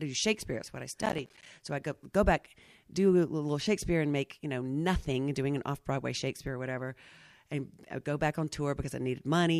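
From 1.02 to 1.46 s, just after "what I", processor overload crackle tears through the speech: a dozen or more missed deadlines on buffers of about 10 ms each leave hard-edged silent gaps. Unlike a single dropout, the gaps cluster into gritty crackle that stops when the load clears.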